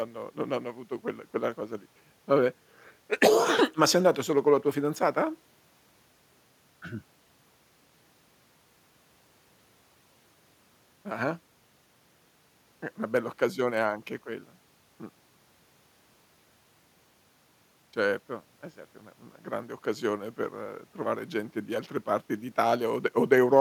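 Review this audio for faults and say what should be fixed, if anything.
Nothing here needs fixing; no faults can be heard.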